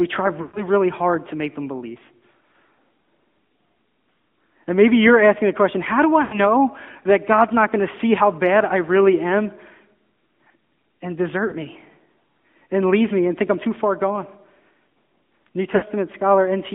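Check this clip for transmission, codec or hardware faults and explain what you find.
The speech is carried over an AMR narrowband mobile codec, and four short dropouts from lost AMR speech frames occur.

AMR narrowband mobile codec, throughout: the band is confined to roughly 150 Hz to 3.5 kHz, so the voice sounds thin and boxed-in. AMR-NB rebuilds speech from a vocal-tract filter excited by a handful of pulses per subframe. At this clip's rate, which fits a mid-range mode near 10.2 kbps, the damage is plainly audible as a buzzy, synthetic edge on the voice.

Lost AMR speech frames at 0.42 to 0.61 s (about 120 ms), 6.22 to 6.40 s (about 100 ms), 11.48 to 11.54 s (40 ms) and 15.76 to 15.84 s (60 ms). The first ends just before "really hard to make", and the second follows "the question how do". When frames fail their checksum, the decoder repeats the last good pitch and filter settings at decaying gain. 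The first two gaps, consistent with runs of five or six 20 ms frames, stretch the sound and fade it toward silence. The two shorter gaps, two and three frames long, draw the sound out more briefly before the speech resumes.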